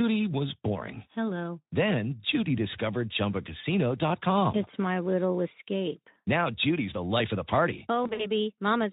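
VoIP packet loss concealed by the speech codec, 8.03 to 8.26 s, after "life of the party": the decoder extrapolates across lost packets, leaving a buzzy or noisy, fading smear.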